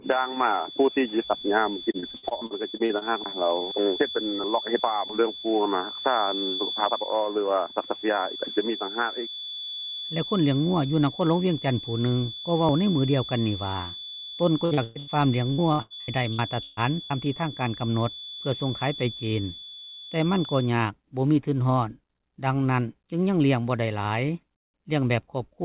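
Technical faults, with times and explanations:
0.00 to 20.74 s, feedback whistle: A thin, steady 3.4 kHz whistle sits well below the sound, swelling and fading slowly. A speaker-to-microphone loop hovering at the edge of feedback is the likely cause.
1.91 to 3.04 s, 14.65 to 15.10 s and 15.52 to 17.13 s, repeated packet loss (robotic sound): Audio drops out again and again, with gaps up to 144 ms. Each hole is filled by extending the last sound, giving choppy fragments.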